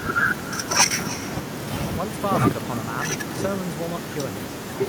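Speech runs throughout with an echo with no canceller: each phrase returns as a distinct, thinner copy roughly a third of a second later, at about 14 dB below the talker. The far end's loudspeaker feeds its microphone and nothing subtracts it. Unlike room reverberation, which smears into a continuous decaying tail, this is a separate delayed repeat with a clear gap, timed by the network round trip.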